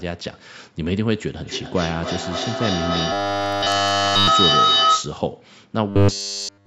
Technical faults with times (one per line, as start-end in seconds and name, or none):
1.43-5.24 feedback howl
3.12-4.28 robotic sound from repeated short buffers
5.90-6.66 robotic sound from repeated short buffers